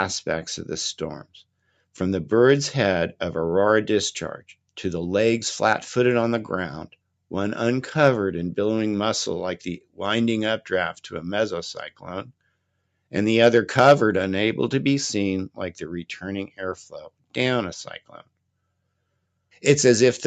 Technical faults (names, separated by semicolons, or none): noise suppressor applied to music or sounds; sound cut by the noise suppressor